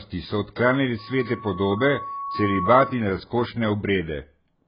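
A speech clip whose whole length is band-limited, with nothing above 5.1 kHz and heavy codec damage that leaves it dull and smeared. The likely cause is AAC compression at a very low rate, fitting AAC-LC at around 12 kbps, where the encoder drops the top band and coarsely quantises what remains. A loudspeaker feedback squeal starts at 0.98 s, just after "so odklanjali", and runs to 3.10 s. It is a single 1.1 kHz tone that swells over roughly one and a half seconds to about 10 dB above the speech, because the microphone is re-amplifying its own loudspeaker at that frequency with loop gain above one.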